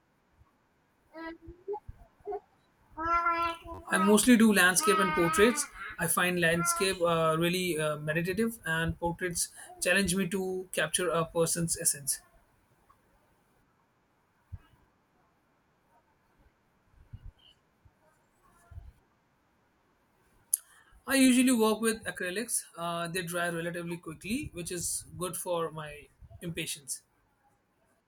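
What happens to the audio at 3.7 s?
From 3.74 to 3.79 s there's a repeated buffer: fresh audio ran late, so one 10.7 ms chunk replays four extra times, giving a brief buzz.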